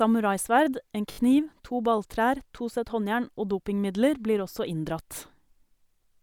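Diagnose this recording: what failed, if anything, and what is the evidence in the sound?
Repeated buffer at 1.12 to 1.18 s, a driver or buffer stage fault. The same short fragment of speech sounds four times in a row, with a hard join at each repeat, giving a brief buzzy stutter. This fits a 20 ms buffer being replayed while fresh audio arrived late.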